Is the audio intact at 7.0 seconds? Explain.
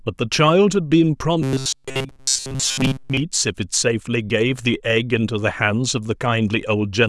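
Yes, at 7.0 seconds the audio is intact, with no dropout, click, distortion or other fault to be heard there.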